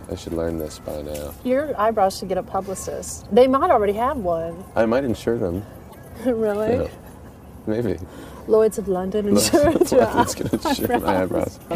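The likely cause is a broken MP3 bit reservoir: frames appear to have been dropped from the stream, so the frames that follow reach back into earlier frame space for their borrowed data and decode someone else's bytes instead. In the audio this shows up from 5.89 s to 5.96 s, about 70 ms of corrupted sound where the signal skips ahead. That span matches roughly three 26.1 ms frames decoding wrongly before the stream recovers.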